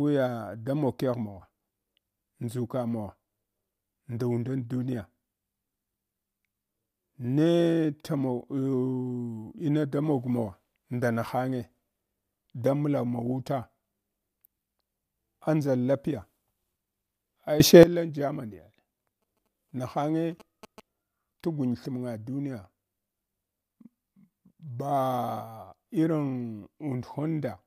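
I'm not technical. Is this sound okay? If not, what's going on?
No. Sudden gain jump at 17.60 to 17.83 s: the speech and background noise leap louder together, likely from a volume change applied instantly instead of gradually.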